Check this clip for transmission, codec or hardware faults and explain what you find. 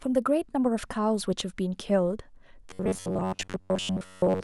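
One fault is present: robotic sound from repeated short buffers, running from 2.71 s to 4.44 s. Over that stretch the speech turns into a hard, metallic buzz pitched at 93.8 Hz that tracks the syllables only loosely. The likely cause is audio arriving too slowly, so playback fills the gaps by looping the last block of roughly 10.7 ms. For most of the stretch the loop replaces real audio, and that fixed repetition rate imposes the steady buzz pitch.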